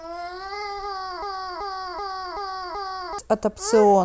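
A speech clip with a broken-record loop from 1.22 to 3.19 s: a 381 ms fragment repeats five times, likely a stalled player or stream, replacing the intended audio.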